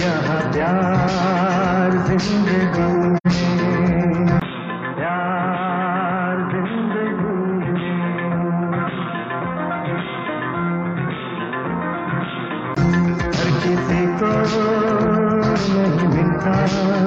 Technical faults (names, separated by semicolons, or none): AAC frame loss with muting; input switched to a poorer device